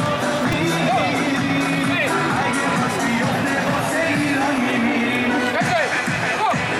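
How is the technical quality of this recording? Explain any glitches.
There is one glitch. At 0.52 s, a repeated buffer causes a tiny buzz. A 2.9 ms chunk, fitting a 128-sample buffer, replays three extra times, losing about 10 ms.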